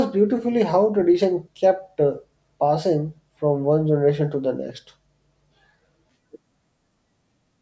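No technical faults are audible.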